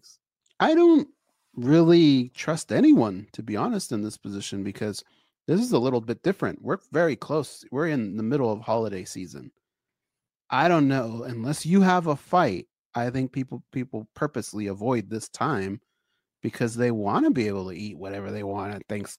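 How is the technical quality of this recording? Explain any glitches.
The speech recording is technically sound, with a steady, intact signal and no glitches to explain.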